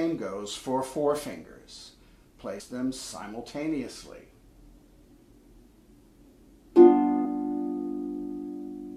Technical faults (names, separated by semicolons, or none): compressed frames skipped